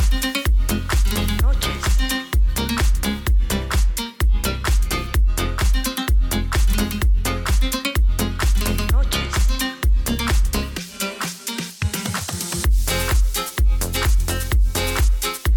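Nothing here sounds wrong; there are no technical faults to point out anywhere in the clip.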